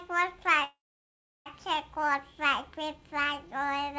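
A call audio freeze runs from 0.64 to 1.48 s, likely from packets held up until the jitter buffer emptied. The last sound trails off as a fading buzz or hiss into about 0.7 s of silence, then resumes where it stopped, with nothing lost but everything about 0.82 s late.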